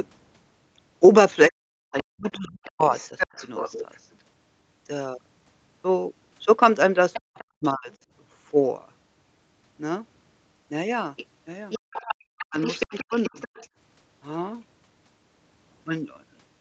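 Speech recorded over a call, with the talker's voice repeatedly sinking and breaking up. From 1.49 to 2.94 s, 7.25 to 7.91 s and 12.47 to 13.34 s it dips by something like 40 dB in pieces, the likely cause being speech suppressed in double talk: with both ends talking, the echo canceller could not tell this voice from the loudspeaker echo and pulled everything down. A second, quieter voice rides underneath at 2.0 to 3.99 s, 7.13 to 7.94 s, a brief scrap at 11.2 s, and 11.7 to 13.68 s, roughly 15 to 20 dB below the talker. This is likely the other side's voice leaking through, loudspeaker playback the canceller failed to fully remove from the microphone. Between 11.79 and 12.19 s the room sound itself drops out for a fraction of a second, by about 36 dB, which is background gated by the echo canceller clamping the microphone while the loudspeaker played.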